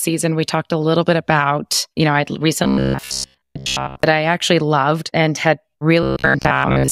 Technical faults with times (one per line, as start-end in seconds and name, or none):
2.64-4.03 robotic sound from repeated short buffers
6.03-6.91 robotic sound from repeated short buffers